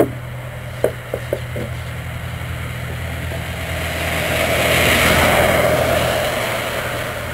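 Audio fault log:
Throughout, periodic clock jitter. The converter's sample clock is being shaken at a steady rate of around 1 kHz. Each moment is sampled slightly early or late in a repeating cycle. This puts copies of every frequency component above and below it, spaced about 1 kHz away. Higher components are hit harder, so the upper range picks up a rough, metallic edge. The edge follows the sound itself and disappears when nothing is playing.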